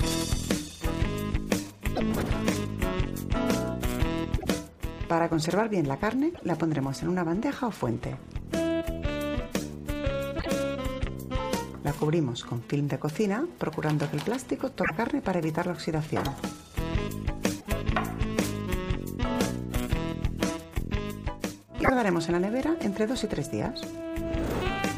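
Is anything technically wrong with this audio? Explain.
Yes. Seven short glitches occur, at 1.95, 4.38, 6.34, 10.39, 14.83, 17.60 and 21.83 s. Each lasts about 60 to 85 ms, two to three 26.1 ms frames. The sound skips ahead and breaks into a brief chirp, burst or short hole. The likely cause is a broken MP3 bit reservoir: after dropped frames, the decoder borrows the wrong bytes.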